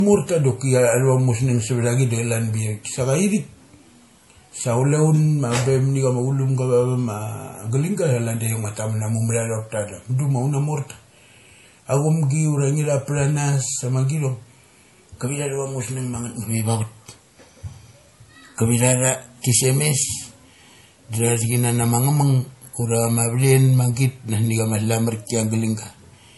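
Right from the start and all the way through, the speech has nothing above about 11.5 kHz, and the top end has that swirly, smeared edge of a starved MP3 encode. Yet the file itself is a big, roomy one. That's the classic sign of low-bitrate audio saved at a high bitrate: it was likely squeezed hard first, somewhere around 48 kbit/s, then re-encoded generously. The second pass can't bring back what the first one threw away.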